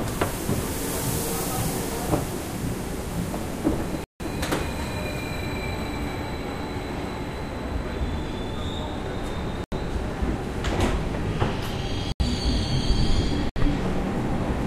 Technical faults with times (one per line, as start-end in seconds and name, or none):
4.04-4.20 block of digital silence
9.64-9.72 block of digital silence
12.12-12.20 block of digital silence
13.49-13.56 block of digital silence